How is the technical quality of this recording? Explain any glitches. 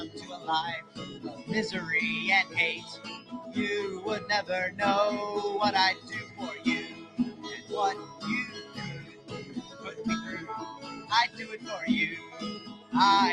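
The quality is compromised by a speech-style noise suppressor. Throughout, a noise suppressor applied to music or sounds treats steady content as noise, so levels pump over a swing of about 15 dB.

Sound is also cut by the noise suppressor at 0.08–0.47, 0.82–1.47, 2.45–3.53, 5.95–6.39, 6.87–7.71, 8.05–9.83, 10.76–11.39 and 12.23–12.93 s. Held sound sinks by about 8 to 10 dB, and tails are chopped short.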